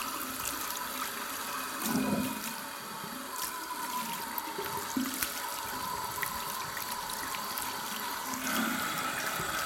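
No technical faults are audible.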